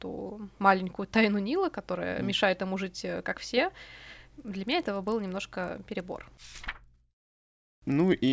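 From 4.4 s to the end, the resampler restarted on every 40 ms block, leaving a 25 Hz buzz under the speech, seen as evenly spaced vertical spectrogram lines.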